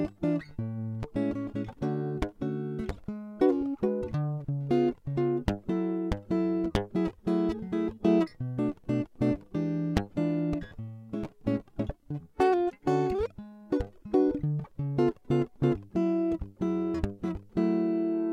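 The music carries no audible technical faults at any point in the recording.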